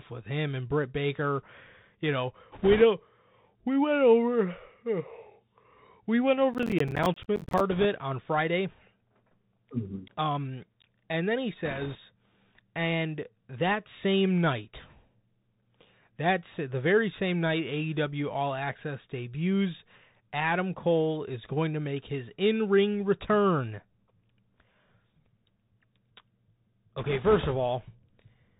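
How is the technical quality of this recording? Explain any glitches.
The recording has plainly audible narrowband headset coding throughout, plus several brief damaged stretches.

The whole clip carries the Bluetooth CVSD headset codec. Nothing above 4 kHz survives, s sounds turn scratchy, and a granular hiss sits under the speech. This is one-bit up-or-down coding with an adaptive step, which fits a 64 kbit/s stream. Loud high sounds outrun the step and distort, unlike the even, flat muffling of a simple low-pass.

Bit errors on the Bluetooth voice link occur at 2.52 to 2.82 s, 7.71 to 7.85 s, 11.65 to 11.98 s (just after "and then he"), and 26.99 to 27.53 s. Flipped bits at an error rate of a few percent add a rushing, crackly noise over the speech. Each CVSD bit nudges the signal only slightly and errors fade, so there are no sharp loud clicks.

Processor overload crackle runs from 6.54 to 7.60 s, right after "we went". 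Around thirty buffers of about 10 ms missed their deadline, and each miss left a short hard-edged silent gap. Together they make a gritty tearing that stops once the load passes.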